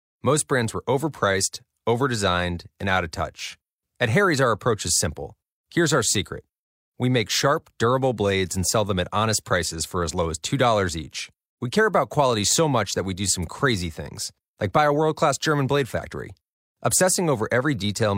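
Speech recording; no technical faults to report.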